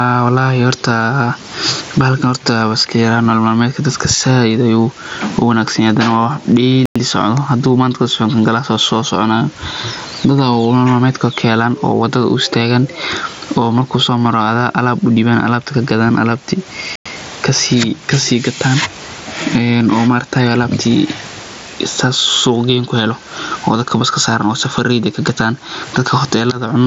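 Gain pumping runs through the whole speech clip. The level keeps breathing. Each loud syllable pulls the gain down. The swing is roughly 15 dB. Loud and quiet passages sit close together, and the speech sounds squashed. The likely cause is input gain set far too high, with a fast limiter clamping every peak.

At 6.86 s the sound drops out for 100 ms. The same hole returns at 16.96 s, again 100 ms long. That is 10.1 s later. This is a gap between chunks. The audio was handled in 10-second blocks, and silence was inserted at each join. Nothing seems missing from the speech. The flow is simply broken at regular points, which fits late chunk playback or codec padding.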